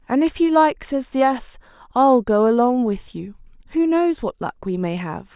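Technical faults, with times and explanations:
No technical faults, with times or explanations, are present in this clip.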